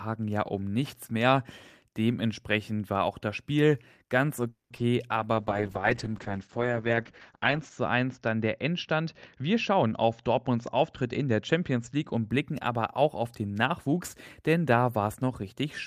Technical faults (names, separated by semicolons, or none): call audio freeze; short concealed packet loss; call bitrate drop; jitter buffer speed-up